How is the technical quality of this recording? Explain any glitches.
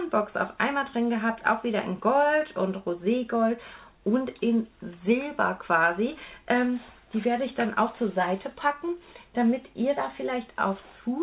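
Nothing stood out on listening, so there are no glitches in this recording to explain.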